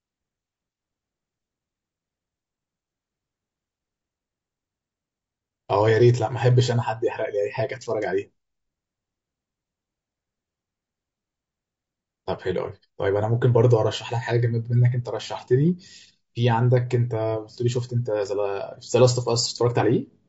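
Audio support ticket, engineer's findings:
Rough, grainy speech throughout, noise between the harmonics, lowered or synthetic top band. Low-delay AAC compression, likely AAC-ELD; short frames can't resolve pitch well, fits around 32 kbps.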